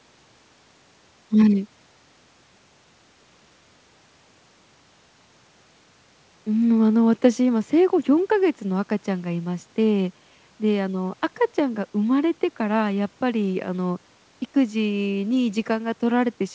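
No technical faults can be heard in the speech, which has the band-limited character of a wideband call path with nothing above 8 kHz, as fits a G.722 codec.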